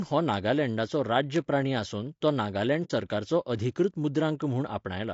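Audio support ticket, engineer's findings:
Low-delay AAC compression, throughout: speech rough and grainy, noise filling the gaps between harmonics, thin or synthetic-sounding top band. Likely AAC-ELD at a low rate, roughly 32 kbps, whose short frames smear harmonic detail. Spectrogram: blurred harmonic lines, speckled fill between them, patchy upper band.

Bit error spike at 0.34 s, 1.36 s, 2.28 s and 4.42 s, the last just after "सरकाराचो अधिकृत". Each is a single sharp tick unrelated to the speech. Probable component: memory or digital link. One flipped bit throws a single sample by a power of two before it returns. Waveform: lone one-sample needle. Spectrogram: thin full-height vertical line.

AAC frame loss with muting, 2.84 to 2.91 s, just before "सरकाराचो अधिकृत". About 60 ms of speech drops out as a soft-edged hole, consistent with a couple of lost frames zeroed by the decoder, with the overlapping windows fading out and back in. 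Waveform: tapered gap. Spectrogram: blank column with soft edges.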